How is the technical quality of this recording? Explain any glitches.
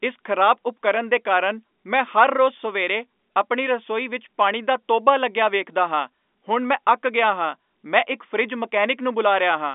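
No glitches or faults heard.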